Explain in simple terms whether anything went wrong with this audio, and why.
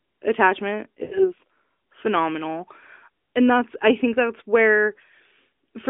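From about 1.04 to 1.33 seconds the speech smears into a drawn-out, fading sound, drops toward silence, then returns briefly weak or rough. These are lost AMR speech frames. Radio errors corrupted a short run of the phone codec's speech frames, roughly 80 ms of audio. The decoder filled the gap by repeating the last good sound with falling volume. The mobile codec itself, which limits the sound to the phone band, is doing its normal job.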